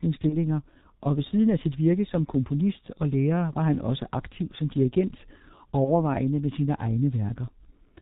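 From start to finish the speech carries G.723.1 codec damage, and it is heavy. The sound is muffled and hoarse, and consonants smear together, consistent with the codec's 6.3 kbit/s mode. That rate fits 30 ms frames whose voice model adapts only slowly. On a spectrogram, energy stops sharply around 4 kHz with an empty band above. Harmonics look coarse and blocky, and fricatives appear as blurred patches instead of crisp bursts.

At 0.29 to 0.37 s, and again at 5.85 to 6.10 s, VoIP packet loss concealed by the speech codec interrupts the audio. Each gap fits a single lost 30 ms frame. The decoder filled it by extending its last pitch and filter at falling gain, so the sound briefly becomes a buzzy tone or a coloured noise that fades. Because each frame depends on the previous one, the second event stays weak and distorted for about a quarter second. In the waveform this shows as a shrinking stretch. 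On a spectrogram it appears as frozen, flat harmonics that fade out.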